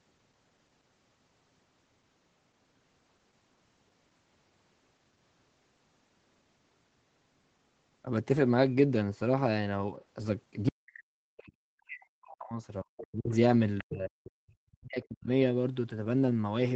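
Speech suppressed in double talk begins at 10.68 s and runs to 12.55 s. The level dips in pieces by as much as around 40 dB, likely because the echo canceller, faced with both sides talking at once, pulled down the near talker along with the loudspeaker echo. Within that stretch, from 12.38 to 12.46 s, the other side's voice leaks through as a faint scrap well below the talker, likely residual loudspeaker echo the canceller failed to remove. The same suppression returns at 12.83 to 13.34 s, with another brief leak of the far voice at 12.98 to 13.02 s. Further dips follow at 13.81 to 14.13 s and 14.72 to 15.29 s, with a quieter leak at 14.24 to 14.31 s.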